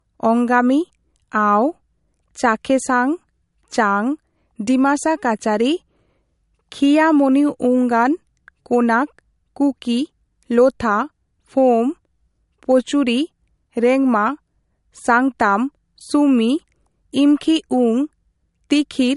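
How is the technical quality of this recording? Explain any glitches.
The recording has one fault, and it runs through the whole clip. It is low-bitrate audio saved at a high bitrate. Nothing is heard above about 11.2 kHz, so the speech lacks its top end and sounds dull. The likely cause is an earlier pass through a low-bitrate MP3 encoder, near 49 kbit/s judging by the cut-off. The file was then re-encoded as MP3 at a much higher rate. That second pass cannot bring back the removed high frequencies or undo the first encoder's losses.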